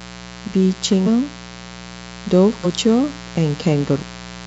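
A mains buzz runs under the speech for the whole clip, sitting around 20 dB below it. It is built on a 60 Hz fundamental, but hard switching edges, typical of a dimmer, rectifier or poorly shielded cable, put harmonics of 60 Hz well up into the kilohertz range. The result is a steady, raspy buzz rather than a smooth hum, and it does not change with the speech level.

Compressed frames are skipped at 1.03 s, 2.60 s and 3.95 s. At each point the decoder either never received some frames or discarded them as corrupt, so playback jumps forward. The jumps are about 200 ms, about 150 ms and about 150 ms, which fits roughly four, three and three frames of 46.4 ms each. At each join a piece of the speech is simply missing.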